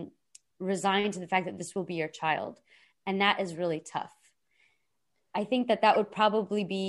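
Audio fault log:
5.94–5.96 s, corrupt frame decoded: right after "i think that", a quick squeaky blip near -20 dBFS from a couple of damaged frames decoded with scrambled gains.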